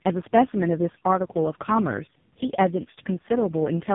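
Rough, muffled and warbly speech runs the whole way through, with nothing above about 3.8 kHz. This is tandem speech coding: three low-rate speech coders in a row, likely GSM full rate twice then AMR-NB, each re-encoding the previous one's already degraded output.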